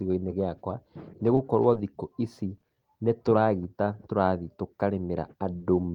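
Three short concealed packet losses occur, at 1.35–1.39 s after "gĩakwa nĩ", at 1.73–1.77 s just before "thikũ ici nĩ", and at 2.60–2.64 s after "thikũ ici". Each time, about 20 ms of audio never reached the decoder, and the receiver synthesised a continuation of the preceding sound before blending back, leaving a brief smear or wobble in the speech.

At 5.58–5.62 s there is a short stall from a late packet. The jitter buffer ran dry while a packet arrived about 20 ms late, so the receiver held the last sound for 20 ms and then resumed without losing anything, heard as a slightly overlong moment with a slight buzz or dip.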